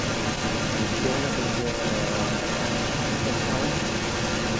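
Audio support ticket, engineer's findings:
Echo leak, whole clip, 0 to 4.6 s: delayed copy of the speech about 360 ms behind, roughly 5 dB louder than the speech itself. Likely far-end speakerphone, echo canceller letting mic pickup back through.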